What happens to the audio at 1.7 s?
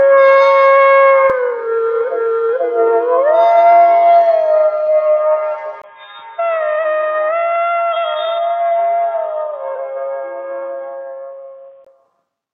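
Nothing goes wrong at 1.7 s; the audio carries on intact through that moment, with no dropout, click or distortion.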